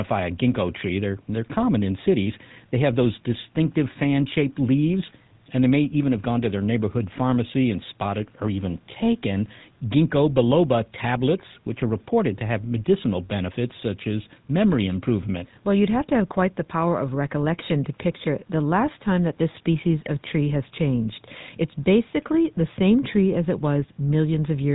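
Throughout the speech, the GSM full-rate codec is plainly audible: its pulse-driven vocal-tract model gives a buzzy, gravelly roughness, consistent with roughly 13 kbps. On a spectrogram, energy stops sharply at 4 kHz, with smeared, coarse harmonics below.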